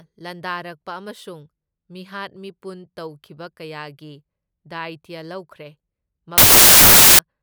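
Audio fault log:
6.38–7.19 s, wrong sample width: loud noise buries the speech, which plays at two-thirds speed and lower pitch, which fits packed 24-bit samples being read as 16-bit.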